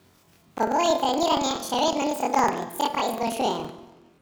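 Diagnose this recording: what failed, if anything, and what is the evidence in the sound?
The fault is at the sample-format conversion stage: planar audio read as interleaved, present throughout the speech. Each block stores all left samples followed by all right samples, but the reader treats them as alternating left-right pairs. Every 46.4 ms block therefore plays twice at double speed, left then right. That is why the speech sits an octave high with a steady flutter at about 21.5 Hz while keeping its normal pace. The block length fits a 2048-sample block.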